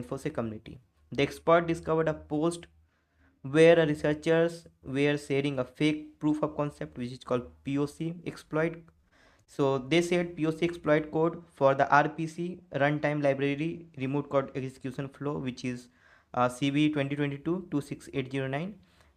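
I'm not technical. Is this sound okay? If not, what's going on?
No. Repeated packet loss (robotic sound) hits from about 8.85 to 9.60 s. Six short pieces of audio went missing, the longest about 21 ms, and each hole was patched by stretching the sound just before it, so that stretch sounds choppy, with pieces missing.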